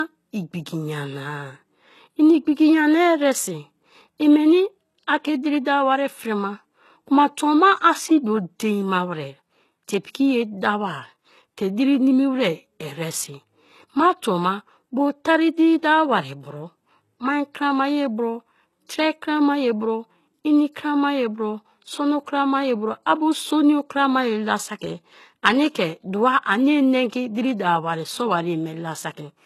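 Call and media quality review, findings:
Throughout: speech dull, nothing above 12.3 kHz, coding artefacts present. Likely low-bitrate audio saved at a high bitrate; re-encoding cannot restore what the first codec removed.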